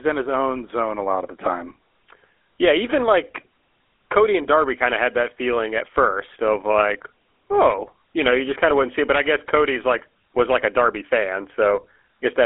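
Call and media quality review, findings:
GSM full-rate codec, throughout the speech. Band limited to about 300 Hz to 3.5 kHz, with plainly audible buzzy, gravelly roughness. Regular-pulse excitation resynthesises the voice through a vocal-tract filter, discarding fine detail, consistent with a 13 kbps rate.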